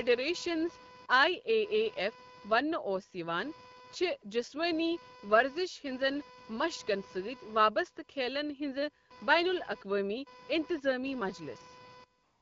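Computer activity noise runs through the whole recording: load swings in the computer disturb the audio circuit's shared ground, producing a buzzy chirping with pulses around 500 Hz, roughly 25 dB below the speech, rising and falling with machine activity rather than the talker.

From 12.23 s to 12.41 s, AMR comfort noise takes over. The phone judged the talker silent and sent no speech frames for about 186 ms, so the receiver substituted smooth synthetic noise for the real background, which switches in abruptly at the end, while the rest of the speech is lightly coded AMR-WB.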